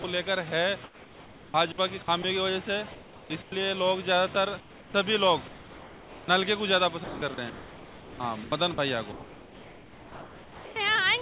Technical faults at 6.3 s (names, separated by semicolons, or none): comfort noise in place of the background; onset clipped by the voice detector